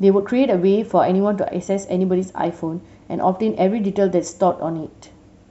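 No technical faults can be heard anywhere in the speech.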